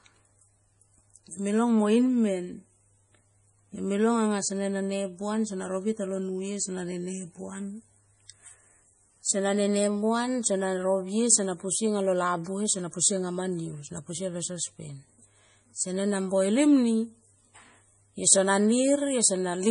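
Speech runs through the whole recording with heavy MP3 compression damage, likely from a low-bitrate encode; the damage points to something around 32 kbps. Nothing survives above 10.5 kHz, and the sibilants carry a watery, swirling quality as weak frequency lines flicker on and off between frames. A plain low-pass filter would dull the top without that churning, and noise reduction would leave its warbling mostly in the background rather than on the voice's own consonants.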